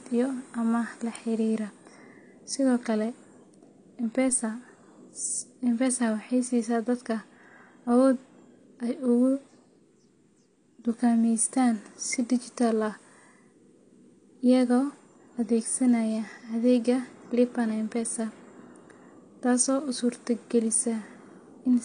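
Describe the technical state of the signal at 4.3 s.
A DC step occurs at 4.29 s. The waveform's zero line jumps suddenly to a new offset, as happens when a converter recalibrates or a biased input is switched in. The offset does not stay put: it drains away at the rate of a 5 Hz high-pass, so the baseline glides back toward zero over a fraction of a second. That abrupt shift is heard as a single low thump under the speech.

At the same moment, the speech carries the plainly audible damage of AAC compression, which runs through the whole clip. The spectrum stops dead at 9.8 kHz, and sibilants and sustained sounds take on a dull, smeared, warbling texture. The likely cause is AAC-LC coding at a low rate, which fits a bitrate of about 32 kbps. At that rate the encoder lowers the cut-off and quantises the remaining frequency lines coarsely.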